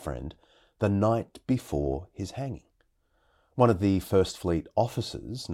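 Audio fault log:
No faults detected in this speech recording.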